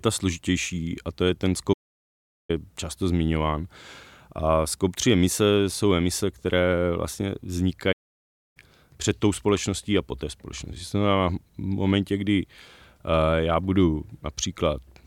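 Twice in this speech clip the playback stalls. The first runs from 1.73 to 2.50 s: right after "a to je ten" the audio drops to dead silence for about 0.76 s, then picks up with "často zmiňován". The second, 7.92 to 8.57 s, cuts in after "jsou emise které vlastně" for about 0.63 s before "před tou společností a" arrives. Each gap is likely the player running short of data or getting blocked until it caught up.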